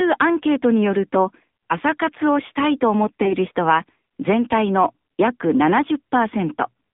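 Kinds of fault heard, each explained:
AMR narrowband mobile codec: speech is coded by a vocal-tract model at 8 kHz sampling, limited to 150 Hz to 3.7 kHz, sounding plainly buzzy and synthetic, consistent with a low rate such as 7.4 kbps.
Lost AMR speech frames: from 3.24 to 3.35 s the decoder conceals a failed frame by reusing earlier settings at falling gain, giving a brief dip or warble that fits one lost 20 ms frame.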